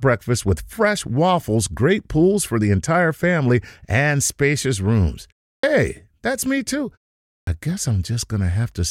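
At 5.58 s, after "family and spacious rooms" and a 0.34 s pause, and again at 7.42 s after "that's me too" and a 0.53 s pause, a clipped start after a pause swallows about 54 ms and 53 ms as the output wakes. Onsets jump abruptly from silence, with a hard waveform edge and no spectrogram lead-in.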